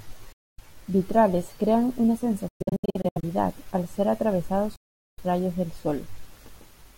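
Packets likely failing to reach the headphones in time cause Bluetooth dropouts in this speech: the speech drops to silence and resumes further on, as if it had kept playing. The first runs from 0.32 to 0.60 s, losing about 255 ms. From 2.48 to 3.24 s, after "crean una" and before "al ser atravesados", gaps totalling about 441 ms are scattered across the span, the longest 116 ms. From 4.76 to 5.20 s, between "al ser atravesados" and "rayos del", about 418 ms is missing.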